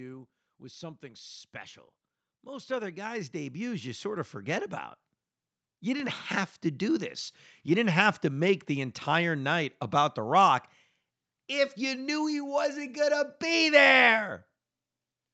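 From 0.44 to 4.37 s the level climbs by about 14 dB as automatic gain rises: the gain control decided the input was too quiet and kept turning it up, so the speech and the room noise behind it swell together rather than jumping. A second, smaller gain rise follows from 5.8 to 7.21 s, adding about 4 dB in the same gradual way. Everything sits under an 8 kHz ceiling from the call path.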